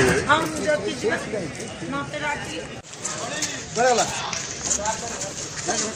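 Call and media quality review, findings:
Frames out of order: brief garbled flutter, 0.40–0.46 s and 1.70–1.76 s. Likely decoder/jitter buffer playing two adjacent 23.2 ms blocks swapped, consistent with single-frame reordering; no time lost, sound continues on schedule.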